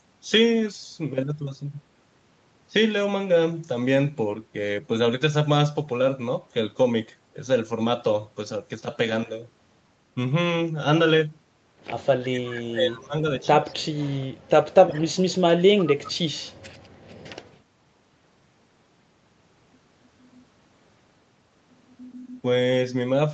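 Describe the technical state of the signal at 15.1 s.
At 15.1 s the speech is sharply turned down, sinking by roughly 40 dB so that it nearly vanishes, within a dip that runs from 14.68 to 15.35 s, about 0.7 s in all. The likely cause is speech suppressed in double talk: with both parties talking at once, the echo canceller could not tell this talker apart from the loudspeaker echo and attenuated everything it picked up, taking the wanted speech down along with the echo.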